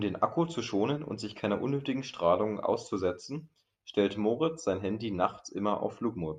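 No technical faults can be heard anywhere in this speech recording.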